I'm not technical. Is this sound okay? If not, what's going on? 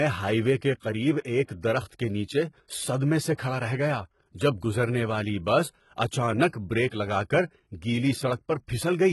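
No. The speech has been squeezed hard to save space, most likely with HE-AAC compression. This method keeps only the lower part of the sound properly and invents the upper part by copying lower sounds upward and roughly reshaping them. Here the damage is heavy throughout: nothing is left above about 11.8 kHz, and what sits at the top is a stand-in, so s sounds come out gritty, metallic or lispy.

There is also pre-echo at 3.34, 6.49 and 6.88 seconds. The compression handles sound in small chunks and spreads its background noise evenly across each chunk. When a sudden, sharp sound lands late in a chunk, that noise leaks into the quiet moment just before it. So a short hiss of about 40 milliseconds comes just ahead of each of those sharp sounds, and their start sounds softened or smeared.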